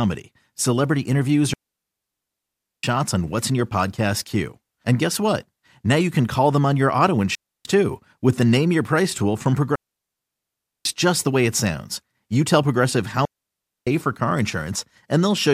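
Four digital wireless dropouts cut into this speech. The first runs from 1.53 to 2.83 s, a 1.3 s hole after "celebrity interviews" that ends on "on what's in your". Next is 7.35 to 7.65 s, about 0.3 s between "them on your auto" and "too with the". Then 9.75 to 10.85 s, about 1.1 s, and 13.25 to 13.87 s, about 0.62 s, just before "for car". Each time the link lost too much data and the receiver muted with a very quick fade, leaving clean near-silence with no noise burst on either side.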